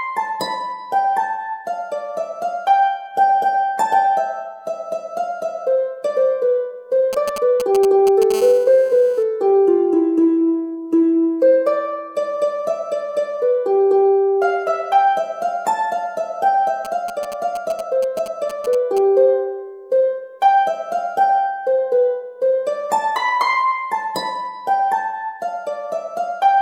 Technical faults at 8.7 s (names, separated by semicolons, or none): GSM phone buzz